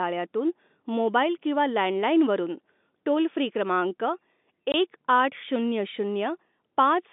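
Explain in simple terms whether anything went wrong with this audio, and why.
A stretch of the call data went missing on its way to the receiver, a case of packet loss filled with silence. At 4.72 to 4.74 seconds, a 20 ms gap with hard edges cuts into the speech, which fits one lost packet. The narrow, telephone-like tone comes from G.711 telephone coding and is expected.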